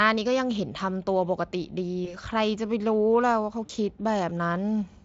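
Speech clip with VoIP packet loss concealed by the speech codec, at 2.05 to 2.17 s and 3.65 to 3.71 s. The gaps fit one and two lost 20 ms frames. The decoder extends its last pitch and filter, so the sound is briefly stretched into a buzzy tone or a coloured noise that fades.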